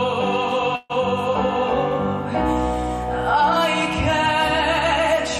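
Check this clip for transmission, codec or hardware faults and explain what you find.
One transmission fault is present. At 0.75–0.92 s, a call audio freeze: the last sound drags into a fading buzz or hiss, likely from a starved jitter buffer, then resumes intact. A spectrogram shows smeared flat bands.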